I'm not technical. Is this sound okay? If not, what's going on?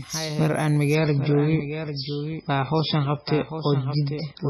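No. A doubled audio track runs through the whole clip: the speech is heard twice, with a noticeably quieter second copy trailing about 0.7 seconds behind the first. That copy is a clean, exact repeat rather than a natural echo off walls, so it adds no roominess. It comes in sharply and overlaps the main speech. The likely cause is the same sound being picked up a second time by a slower route, or two copies left out of step in an edit.

An adaptive stream at a lower bitrate takes over from about 0.95 s to the end. The first moment sounds clear, then the quality suddenly drops without any gap. Streaming services do this when the connection slows: they swap to a smaller, more heavily squeezed version of the audio. Here that cuts off everything above about 5.6 kHz, so the speech loses its crisp, bright edge and sounds dull, with some grainy, watery distortion.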